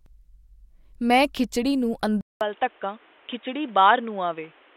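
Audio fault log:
2.21–4.76 s, input switched to a poorer device: after a 200 ms gap the speech drops roughly 5 dB, loses everything above 3.8 kHz and sounds dull and boxy, with a new noise floor around 30 dB down, likely from capture moving to a narrower-band microphone or headset call profile.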